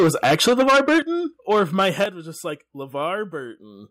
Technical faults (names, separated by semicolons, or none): microphone overload; microphone volume stepped down